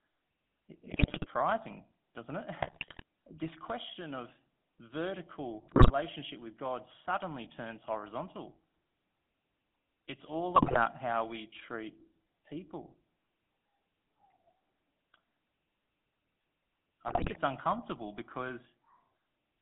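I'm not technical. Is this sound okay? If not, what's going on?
No. The whole recording has a buzzy, gravelly roughness and sounds thin and boxy, as if heard over an old mobile phone. That is the GSM full-rate codec, the original digital mobile phone system. It rebuilds speech from a simplified model of the mouth and throat driven by a coarse buzz, so fine detail is lost. Here only the range from about 150 Hz to 3.5 kHz gets through, which removes the low warmth and the high crispness.

On top of that, the speech breaks up five times: 0.86 to 1.26 s, 2.62 to 3.03 s, 5.68 to 5.91 s, 10.56 to 10.86 s, and 17.08 to 17.39 s. Each break lasts under half a second and brings squawks, pops and gargling. These are GSM bit errors. On a weak phone connection some of the transmitted information arrives scrambled, and the phone rebuilds the sound from wrong instructions, distorting its tone or its loudness until the bad stretch ends.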